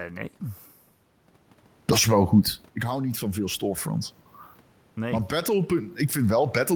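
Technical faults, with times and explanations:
4.96 to 6.76 s, automatic gain rising: the input level drops by about 10 dB, and the automatic gain control compensates by raising its gain gradually, so the speech and the room noise swell together over nearly two seconds, to the end of the clip. Because the background rises with the speech, this is a gain change in the chain, unlike the level shift around 2.5 s, where the talker moved and only the speech changed.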